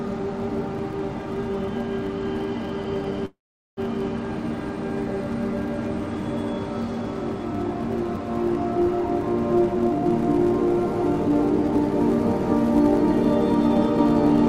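A steady buzz at 172 Hz runs through the whole clip, rising and falling with the signal's level. This is a filter restarted on every block: each block begins from silence with a small transient, and the repetition rate fits a 256-sample block.

From 3.25 to 3.80 s the sound stalls into a brief fading buzz, then about 0.42 s of silence, before resuming where it stopped with nothing lost. This call audio freeze was likely caused by delayed packets emptying the jitter buffer, which inserted a gap of about half a second.

From 9.74 to 10.12 s the sound rushes forward at 163% of normal speed with unchanged pitch. This is a jitter buffer speed-up: the receiver cut out short pitch-period pieces, roughly a fifth of a second in total, to reduce its excess delay.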